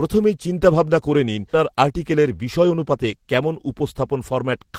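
Right after "চিন্তাভাবনা করে নিন", at 1.53 to 1.55 s, there's a skip ahead. About 0.4 s of speech got dropped and playback jumps straight on with no gap. Then from 1.72 to 4.74 s a jitter buffer speed-up kicks in. The receiver trims tiny pitch-period slices, around a fifth of a second in total, so the speech runs about 7% fast at the same pitch and sounds slightly hurried.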